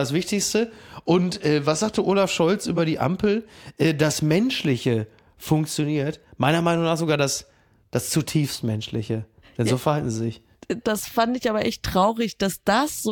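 Listening through the speech recording, nothing stood out as a technical problem at any point.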